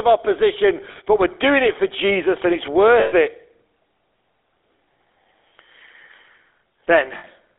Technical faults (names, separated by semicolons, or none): GSM full-rate codec; lost GSM frames